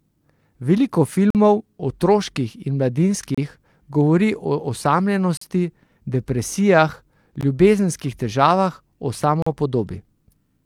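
It's a speech clip with a gap between stream segments showing up every 2 seconds: short, hard-edged holes of silence at 1.30 to 1.35 s, 3.35 to 3.38 s, 5.37 to 5.41 s, 7.41 s and 9.42 to 9.47 s, running roughly 16 to 45 ms each. The segment timestamps don't quite butt up, so the player pads the difference with silence. Nothing's actually missing, the speech just gets pushed later.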